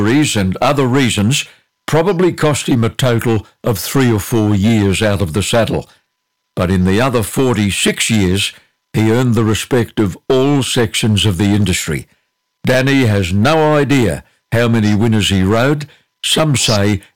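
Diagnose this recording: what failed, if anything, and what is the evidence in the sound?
Hard clipping runs through the whole speech recording. The level was driven about 13 dB past full scale, most plausibly at the converter input or a fixed-point conversion, so every loud syllable has its peaks sheared flat, with around 7 percent of samples pinned at the ceiling. It sounds like a harsh fuzz on every stressed sound. On a waveform, flat-topped plateaus sit at both rails; a spectrogram shows vertical smears of harmonics reaching into the high kHz range.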